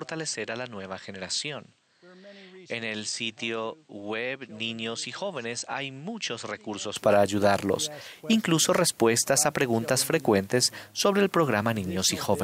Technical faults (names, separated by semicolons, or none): input switched to a poorer device